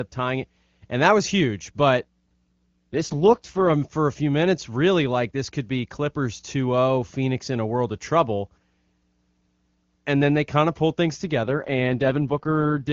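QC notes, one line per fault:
2.03–3.73 s and 11.43–12.92 s, AMR rate drop: the speech turns rough, buzzy and synthetic for about 1.7 s and then about 1.5 s, with no gap and no loss of bandwidth. After the first it returns to the clean wideband sound heard elsewhere. The network has told the AMR-WB codec to fall back to a low mode to protect against a weak link. The roughness fits a drop from the 23.85 kbit/s mode to the 6.6 kbit/s mode.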